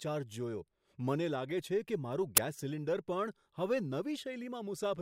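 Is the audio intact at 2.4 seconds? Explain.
No. At about 2.37 s there is an uninitialised buffer fault: a single audio block was sent to the output before any valid samples had been written into it, so whatever data was left in that memory was played back as if it were sound. It is heard as a very brief, loud burst of digital noise lasting about 12 ms, a length that fits one 512-sample buffer.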